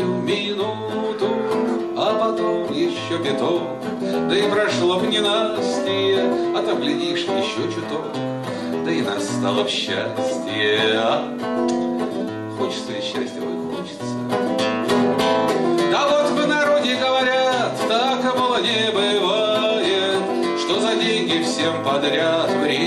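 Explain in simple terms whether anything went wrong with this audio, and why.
Nothing went wrong here: there's no dropout, glitch or distortion anywhere, so there's nothing to explain.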